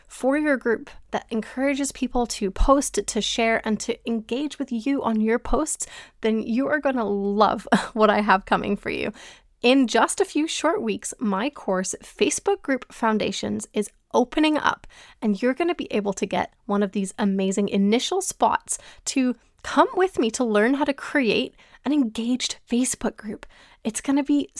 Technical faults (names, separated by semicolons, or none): none